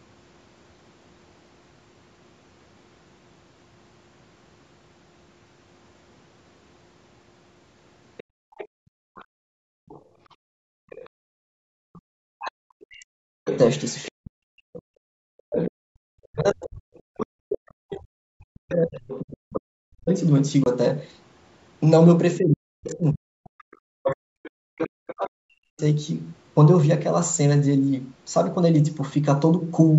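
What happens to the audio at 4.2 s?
At 4.2 s the speech is intact, carrying only the ordinary sound of a call microphone's processing with its lowest bass trimmed and no fault of any kind.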